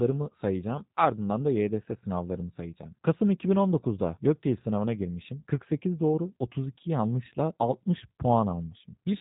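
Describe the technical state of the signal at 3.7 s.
G.729 codec coding is present at 3.7 s, as it is throughout the clip. The speech is rebuilt from a vocal tract filter, a pitch predictor and sparse pulses, at a rate that fits 8 kbit/s. Nothing passes above 3.8 kHz, and the voice sounds plainly rough and synthetic.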